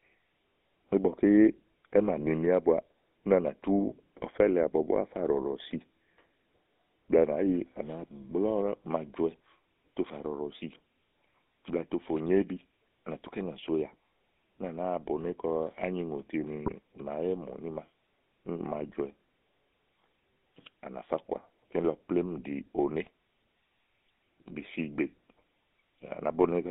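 Speech, carried throughout by the GSM full-rate codec. The band is limited to roughly 200 Hz to 3.7 kHz, and the codec damage is plainly audible: a buzzy, gravelly roughness. That texture comes from the coder rebuilding the voice from a vocal-tract filter driven by a sparse, regularly spaced pulse excitation, which fits the 13 kbps full-rate codec.

GSM bit errors break through twice, from 16.66 to 16.74 s and from 23.03 to 23.08 s. Each burst is a short squawk or pop. Corrupted filter, pitch or gain values reach the decoder, which briefly distorts the spectrum or level. The sound points to a few damaged frames per event and a bit error rate of about 2 percent on a weak radio link.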